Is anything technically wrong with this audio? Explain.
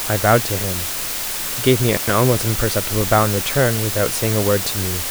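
Yes, there are two faults. Throughout, the speech suffers from low bit depth with dither. Only about 4 bits are used, and dither added before rounding turns the coarse quantisation error into a constant, even hiss, nearly as loud as the speech, with no distortion. On a spectrogram this appears as a uniform noise floor across all frequencies, and the waveform looks fuzzy and coarsely stepped.

From 1.95 to 2.10 s an intermittent contact opens the line for about 103 ms. The speech drops out, leaving only faint hiss, with crackle where the connection breaks and remakes. The waveform shows a sudden near-flat gap with spiky edges, and the spectrogram shows a blank band bracketed by thin broadband clicks.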